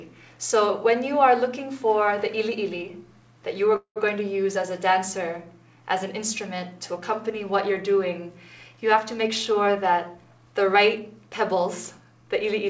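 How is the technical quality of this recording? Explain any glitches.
The recording has two call-transport glitches, and the whole clip sounds band-limited, with nothing above 8 kHz, which fits a wideband call codec such as G.722.

Call audio freeze, 3.76 to 3.98 s: the sound stalls for about 0.2 s. The last moment is stretched into a buzzy tail that fades, and the final 90 ms or so are silent. The audio then resumes exactly where it stopped, so nothing is lost, but everything after it arrives about 0.2 s later. This likely comes from packets delayed in transit, which emptied the jitter buffer and forced the receiver to fill the gap.

Jitter buffer speed-up, 9.18 to 12.12 s: the audio runs about 6% fast with the pitch unchanged, giving a slightly hurried, pressed feel. The buffer had built up more delay than it aims for, so the receiver repeatedly cut out short pitch-period-sized slices, roughly 0.2 s in total across the stretch, to bring the delay back down.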